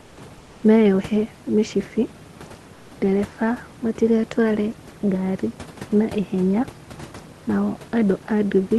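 Comfort noise replaces the background three times, from 0.01 to 0.17 s, from 0.38 to 0.63 s and from 2.73 to 2.91 s. The first two pauses end just before "meyohe mĩcibi" and the last one just before "ndereba matigatware ngari na". In each gap the room's real background gives way to a smooth, featureless hiss about 2 dB quieter. This is likely Opus discontinuous transmission. The sender goes silent in pauses and the receiver synthesises the filler.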